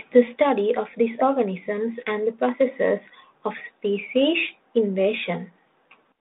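No technical faults can be heard in the speech, which comes over a G.726 ADPCM telephone path at 32 kbit/s with a band running from about 200 Hz to 3.7 kHz and only light coding roughness.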